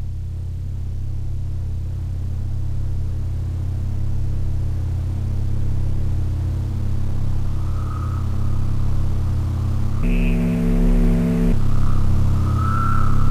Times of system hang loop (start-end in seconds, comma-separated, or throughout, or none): none